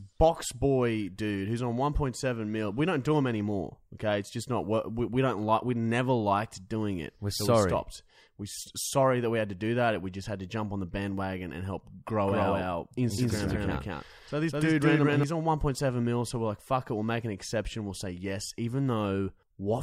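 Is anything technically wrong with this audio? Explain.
Yes. From 12.27 to 15.23 s, just after "the bandwagon and help", the speech has a doubled audio track: a second, equally loud, dry copy trails about a fifth of a second behind, starting and stopping abruptly, likely from a slower capture path recording the same speech again.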